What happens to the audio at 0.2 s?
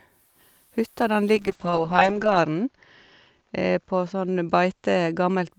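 Nothing goes wrong at 0.2 s; the speech plays through that moment intact, with no dropout, click or distortion.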